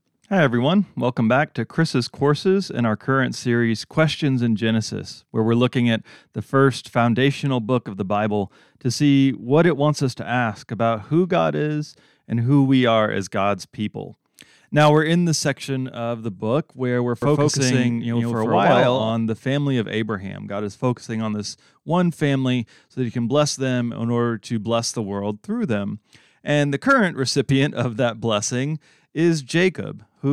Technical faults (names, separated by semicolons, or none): doubled audio track